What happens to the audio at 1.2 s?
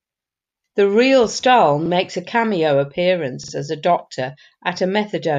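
Nothing goes wrong at 1.2 s: the speech runs through that moment intact, with no dropout, click or distortion.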